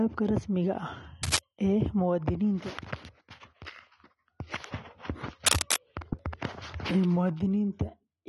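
Speech runs throughout with plainly audible AAC compression artefacts, smeared and warbly, likely from AAC-LC coding, which fits roughly 32 kbps, though content extends to 21.2 kHz. Cable scratch noise, likely from a worn connector being moved, adds rough scratching bursts at 1.23–1.38 s, about as loud as the speech, and at 5.46–5.79 s, somewhat louder.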